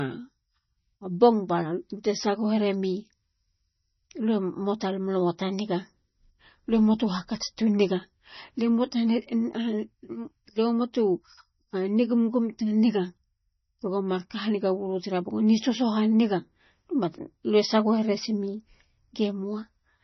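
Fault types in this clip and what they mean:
MP3 compression: the speech sounds watery and swirly, with nothing above 5.9 kHz, unlike a clean low-pass cut; likely from a very low bitrate, around 24 kbps.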